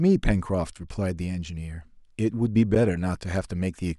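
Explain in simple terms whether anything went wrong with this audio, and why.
A block of digital silence at 2.75 s: for about 8.7 ms the speech drops to silence and jumps straight back with no fade, so it sounds like a brief tick. This most often happens when the playback program fails to fill its output buffer in time.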